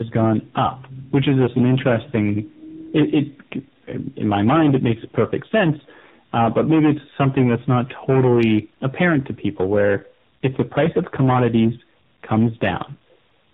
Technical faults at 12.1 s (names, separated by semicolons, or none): hard clipping; tandem speech coding